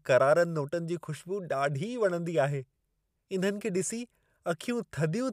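Listening to the speech in this recording, nothing stood out as a technical fault at any point.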